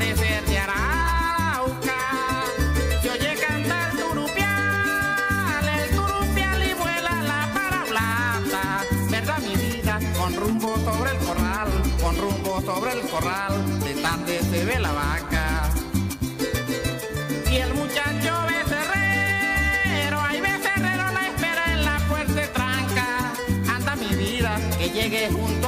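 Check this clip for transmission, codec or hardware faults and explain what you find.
One hardware fault appears: DECT cordless phone buzz from 14.84 s to the end. Radio bursts every 10 ms are rectified, giving a thin 100 Hz buzz rich in harmonics, well below the programme, unlike smoother mains hum.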